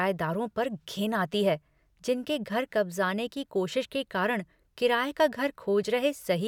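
No technical faults can be heard anywhere in the recording, so there is nothing to describe in time order.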